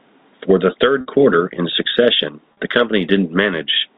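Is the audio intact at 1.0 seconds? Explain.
No, packet loss with pitch repetition hits at 1.01 to 1.06 s: about 50 ms went missing, and the receiver repeated the last pitch period, leaving a briefly held, buzzy sound.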